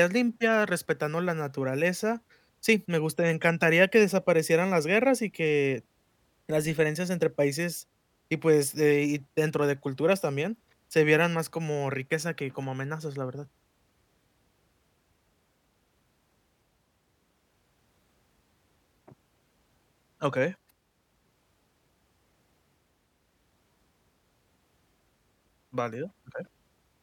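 Listening to the speech in the clip, nothing stood out as a technical problem at any point.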